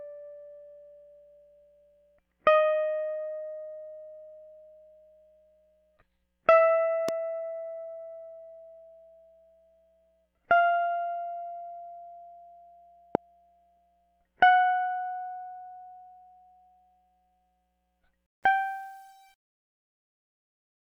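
Music, with two loud pops: a short one from 7.09 to 7.11 s peaking about 15 dB above the track, and a harder one from 13.15 to 13.17 s at about 20 dB, both likely sudden voltage spikes from a switch or static, with the music carrying on underneath. Then there's truncation distortion on the fade-out, which starts around 18.3 s and runs to the end. The grit creeps in from 18.26 s and is worst after 18.5 s, where the tail turns grainy because the level is stepping down through very few bits, consistent with roughly 9-bit resolution and no dither.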